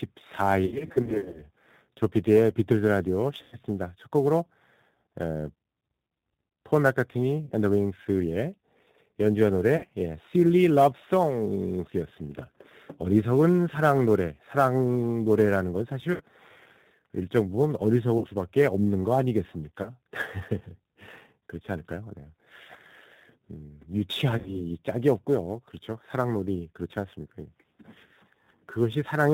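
Across the whole speech clip the sound is band-limited and slightly rough and synthetic, with nothing audible above 4 kHz. That is the G.729 codec at 8 kbit/s, here plainly audible. It does not carry the waveform itself. It rebuilds speech from a vocal-tract filter, a pitch predictor and a handful of pulses in each 10 ms frame, and it discards everything above 4 kHz.

Also throughout, a hiss or graininess follows the loud and bright parts of the speech and disappears in the pauses. This is sample clock jitter. The converter's clock wanders by a few microseconds, so each sample is taken slightly early or late. The resulting error scales with how steeply the waveform is moving at that instant. Here it sits roughly 30 dB below the signal, so it rides on the speech and never exists on its own.

From 0.66 to 1.47 s the speech breaks up into a stretch of stuttering, smeared fragments. Short buzzy, tone-like sustains fade and then recover, repeatedly. 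Shorter single dropouts of the same kind follow at 3.42 to 3.57 s, 7.45 to 7.52 s, 9.77 to 9.86 s, 16.14 to 16.22 s, 18.18 to 18.28 s, 19.82 to 19.92 s and 24.38 to 24.59 s. At each one, the sound briefly freezes into a buzz or coloured noise that sags in level.

This is VoIP packet loss concealed by the speech codec. In the first burst, 380 ms of audio went missing, scattered across 720 ms, with the longest single gap 60 ms. The later gaps range from 40 to 100 ms, which fits 20 ms packets lost two to five at a time. For each gap, the decoder kept extrapolating from its last pitch and filter and turned the gain down frame by frame. Because each frame builds on the previous one, the speech stays weak or distorted for a short while after real packets arrive again.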